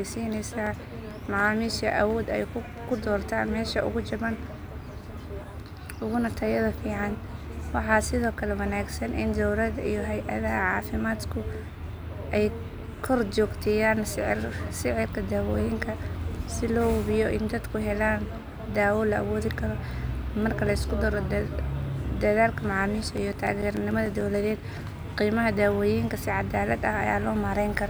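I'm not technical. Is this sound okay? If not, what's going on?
No. The speech has CD scratch ticks: a scratch on the disc defeats its error correction once per turn, leaving short clicks. They run from 0.37 to 1.40 s, and again from 23.03 to 24.65 s, just before "qiimaha daawooyinka", where they last longer.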